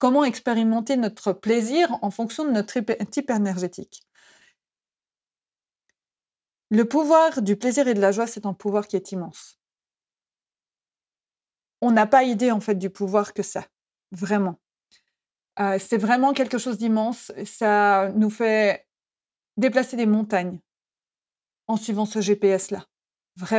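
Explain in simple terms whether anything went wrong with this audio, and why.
Nothing went wrong with this audio, because no fault can be heard anywhere in the speech.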